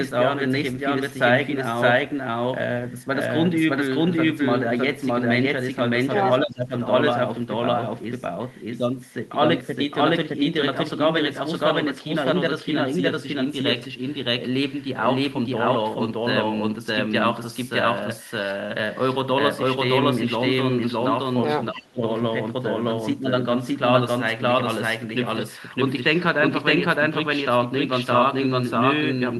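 A doubled audio track runs through the whole speech clip. A second, equally loud copy trails the original by about 0.7 seconds, with no decay or room colour. The likely cause is a slower capture path or an edit holding two out-of-step copies.

Speech suppressed in double talk occurs from 6.43 to 6.72 s and again from 21.71 to 22.02 s. Each time the talker's voice sinks for roughly a third of a second, by about 15 dB and then about 20 dB. The likely cause is an echo canceller that couldn't tell the talker from loudspeaker echo while both sides spoke, so it turned both down.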